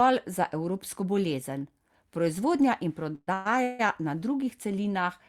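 Call audio freezes at 3.15–3.29, 3.33–3.47 and 3.63–3.81 s, likely from late packets emptying the jitter buffer, stretch the last sound into fading buzzes that show as flat horizontal streaks on a spectrogram.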